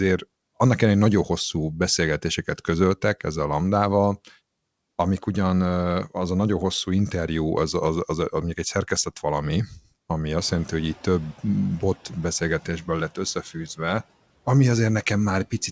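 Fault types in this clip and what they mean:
Speech cut by the noise suppressor: The suppressor treated part of the speech as noise and turned it down along with the background. Just after "mondjuk egy szerkesztett valami", from 9.67 to 9.86 s, around 150 ms of sound dips by up to about 14 dB and sounds swallowed.
Noise suppressor catching up: The room noise jumps by about 18 dB near 10.5 s, and the suppressor's noise estimate lags behind. After "egy szerkesztett valami ami", from 10.38 to 10.93 s, the noise passes with only about 5 dB reduction, then settles over 550 ms.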